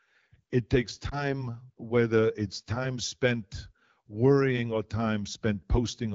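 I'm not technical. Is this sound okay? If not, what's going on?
No. At about 1.09 s there is a brief dip or warble lasting until roughly 1.24 s, just before "whether it's time spent". This is lost AMR speech frames: a radio error corrupted a piece of the call's data, so the phone's decoder filled the gap by guessing from the last good sound at reduced volume. The short disturbance points to a single lost frame, and the speech then recovers over a fraction of a second.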